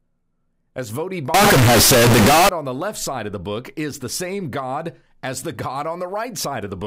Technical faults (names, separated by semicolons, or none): float read as integer